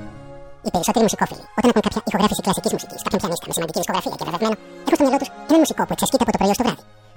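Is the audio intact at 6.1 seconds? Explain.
No. At 6.1 seconds, as everywhere in the clip, the audio is read two samples at a time, playing at double speed and 12 semitones higher. Pairs of samples become single frames, so the spectrogram shows everything an octave up.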